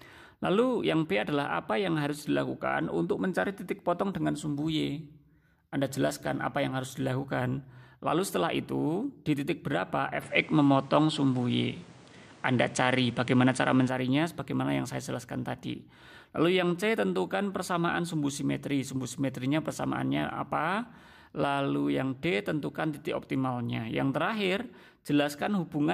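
From 10.22 to 13.88 s the audio narrows, losing everything above 10.6 kHz, shifts in level by around 5 dB with a new noise floor, likely an input switched to a poorer device.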